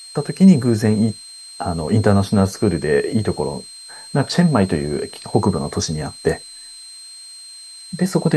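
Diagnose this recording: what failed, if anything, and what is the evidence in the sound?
A thin, steady whistle sits under the speech for the whole recording, wandering between about 4.1 and 4.2 kHz, roughly 20 dB below the speech. This is switching supply whistle, an analogue-stage fault in the power feeding the audio chain. A switch-mode supply has dropped into an audible burst mode or is beating against another converter, and as its load shifts the whistle's pitch slides within that narrow band.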